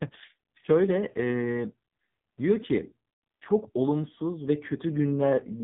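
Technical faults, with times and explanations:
Throughout: AMR narrowband mobile codec. The speech has nothing above 3.8 kHz, and the voice sounds heavily buzzy and synthetic, because the codec rebuilds it from a vocal-tract model driven by a few pulses per subframe. Damage this severe fits a low mode near 5.9 kbps.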